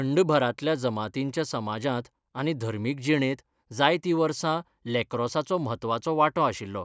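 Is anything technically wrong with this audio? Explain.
No, nothing technically wrong can be heard here.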